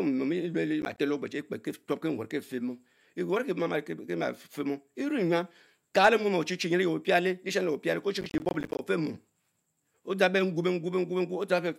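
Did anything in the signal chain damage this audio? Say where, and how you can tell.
Yes. Gritty crackle tears through the speech from 0.82 to 0.98 s and again, longer, from 8.21 to 8.79 s. This is processor overload crackle at the driver/buffer stage: buffers of around 10 ms repeatedly missed their deadline, each leaving a hard-edged gap of silence.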